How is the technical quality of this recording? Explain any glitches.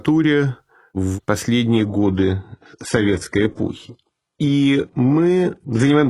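The recording has one fault: an adaptive stream at a lower bitrate, covering most of the clip.

From 1.7 s to the end, the speech suddenly loses its clarity without any gap. The stream switched to a lower-bitrate version, probably because the connection slowed. The treble above about 11.5 kHz disappears, with more codec artefacts. That character fits a shift from roughly 96 kbit/s AAC-LC to a very low-rate HE-AAC stream around 12 kbit/s.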